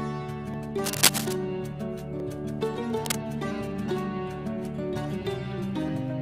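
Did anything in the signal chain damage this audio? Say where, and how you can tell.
Yes. Block of digital silence, at 0.54 s and again at 2.20 s, each lasting about 0.73 ms, which fits a 32-sample run of zeros. That points to the driver or buffer stage. Either the output buffer wasn't filled in time or a calculation produced invalid values, and zeros went out instead. The audio drops out and returns with no fade. A hole this short is heard as a tick or dip, not as silence.

Cable scratch noise, from 0.84 to 1.33 s and from 3.05 to 3.23 s, sits in the analogue wiring. Dense, uneven bursts of scratching and rustling ride over the sound. In the first stretch they are roughly 5 dB above the signal, and in the second they are about level with it. The likely cause is a worn cable, connector or control carrying DC being moved, so that its contact resistance jumps rapidly and injects noise.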